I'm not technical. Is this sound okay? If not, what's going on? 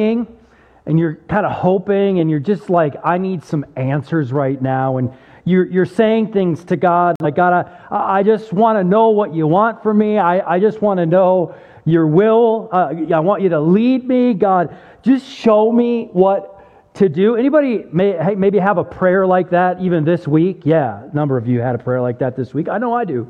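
No, there's one glitch: a corrupt frame muted. From 7.16 to 7.26 s, a chunk of data that fits one damaged frame got dropped, leaving a sudden tenth-second gap of silence.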